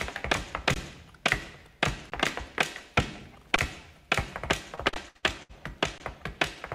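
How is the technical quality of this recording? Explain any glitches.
The recording has two kinds of glitch, brief dropouts and a stretch of choppy concealment.

Underrun with held sample at 0.74, 2.1, 3.56, 4.94 and 5.98 s: the buffer runs dry for 20 ms and the output holds its last value, so the sound briefly freezes flat. Virtually nothing is lost, so it resumes softly.

Repeated packet loss (robotic sound) from 4.75 to 5.51 s: five gaps, the longest 64 ms, are patched by extending earlier sound. About a third of the span is filled in this way, giving a choppy texture with pieces missing.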